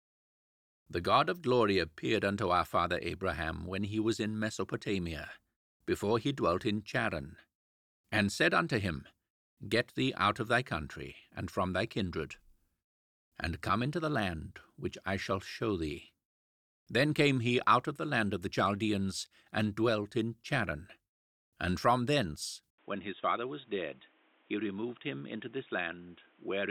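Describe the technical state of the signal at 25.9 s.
At 25.9 s the sound is band-limited, with nothing above 3.8 kHz. It has been dull and boxy since 22.70 s, after an 80 ms gap. It sits about 5 dB quieter over new noise. The likely cause is an input switched to a poorer device.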